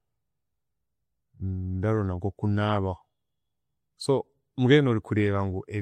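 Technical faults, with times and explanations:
Throughout, MP3 compression: the audio was likely squeezed through a low-bitrate MP3 encoder, around 64 kbps, which starved it of bits, so weak frequency lines flicker between frames, giving the speech a watery, swirly texture with chirpy s sounds and smeared consonant attacks.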